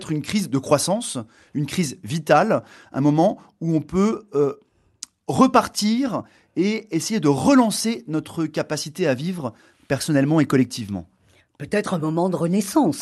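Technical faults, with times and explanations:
No technical faults can be heard in this clip.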